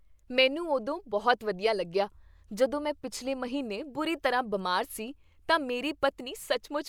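Nothing technically wrong turns up anywhere in this bit of speech, so there's nothing to pin to a time or trace back to a cause.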